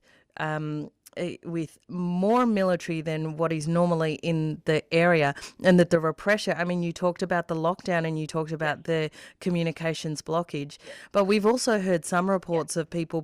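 No technical faults can be heard anywhere in the speech.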